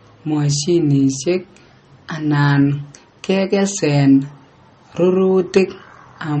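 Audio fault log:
throughout: MP3 compression likely causes the plainly audible watery, swirly sound; spectrograms show nothing above 8.4 kHz and flickering holes, fitting roughly 32 kbps.
5.57 s: hard clipping, peaks overdriven about 5 dB and cut flat, heard as a brief crackle; waveform shows flattened tops, spectrogram a thin broadband streak.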